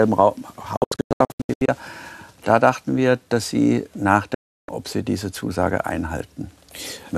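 Digital broadcast dropouts hit from 0.77 to 1.69 s as scattered short holes, then from 4.34 to 4.69 s. The receiver muted lost frames with abrupt cuts, leaving flat waveform gaps and blank spectrogram columns.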